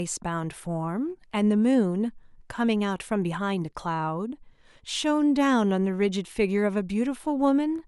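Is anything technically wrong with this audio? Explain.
No, nothing technically wrong is audible in this speech recording.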